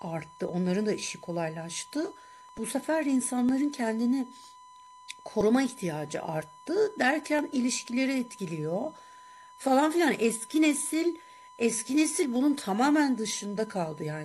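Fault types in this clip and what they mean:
USB whine: the bus's 1 ms frame rate leaking into the audio, heard here as a steady 1 kHz whine sitting about 25 dB under the speech throughout.
overlap between stream segments: overlapping one-second segments get trimmed, so tiny slices of speech vanish, giving tiny skips near 2.49, 3.49, 7.39 and 8.39 s.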